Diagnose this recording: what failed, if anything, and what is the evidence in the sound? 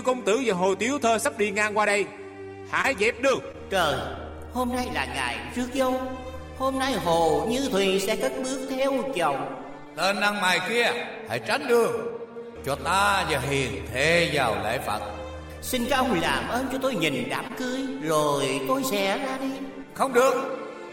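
The network stage failed, with three cases of short concealed packet loss. Brief smears are audible at 2.81 to 2.86 s, 3.52 to 3.55 s and 17.47 to 17.52 s. Each time, about 20 ms of audio arrived too late for the decoder. The receiver patched the gap by extending the preceding sound for 24, 16 and 22 ms respectively, then blended back into the real signal. That synthetic bridge gives the short wobble.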